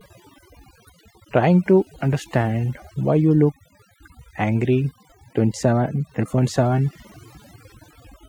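From start to finish, the speech carries overdone noise removal. A noise reduction process was pushed too hard on a noisy recording. It pulls individual frequency bands far down, or out entirely, wherever they sit close to its noise estimate. Quieter parts of the voice fall into that range and vanish with the noise. Between phrases the background drops to near silence, dotted with twinkling specks.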